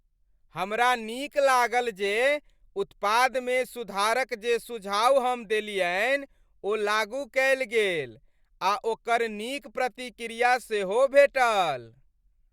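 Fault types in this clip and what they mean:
Nothing stood out on listening; the speech comes through without any audible problem.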